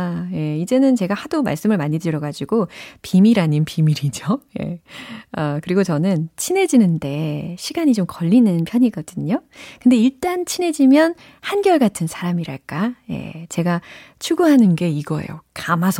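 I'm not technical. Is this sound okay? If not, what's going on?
No. The speech briefly slows and sags about a semitone from 3.49 to 4.40 s, right after "말씀을 많이 드려가지고 비밀", then speeds up and rises from 8.35 to 8.99 s after "저는 친해지는데 시간이 좀", and drops again from 14.65 to 15.45 s. That's likely a drift correction step, where clock-matching software shifts playback speed by about 6% and then snaps back.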